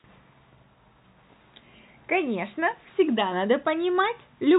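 No faults are present in this speech; it carries the band-limit of G.711 telephone coding, with nothing above about 3.8 kHz, and at most faint quantisation noise tracking the level.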